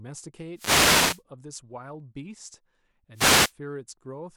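At 0.54 s a burst of static breaks over the speech until 1.23 s, then again from 3.14 to 3.53 s. That's a wireless microphone noise hit: the analogue FM link fades as reflections cancel, receiver noise climbs, and it comes through as a hissy swish.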